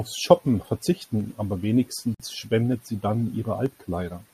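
At 2.14 s the speech stops dead for 51.5 ms and resumes at 2.20 s. This is a gap at a join of encoded pieces. Two segments were encoded separately and spliced without trimming. The encoder's start-up delay and the padding on the last frame were both left in. The result is a short hole of silence with smeared edges. The speech then continues exactly where it broke off.

At 2.72 s, just before "sie dann", a single sharp click sounds. Another click follows at 3.66 s, just after "sie dann". Each is a thin, instantaneous tick with no lost sound around it. The likely cause is dropped samples. A fraction of a millisecond went missing from the stream. The waveform then jumped straight to a later value, and that discontinuity produces the click.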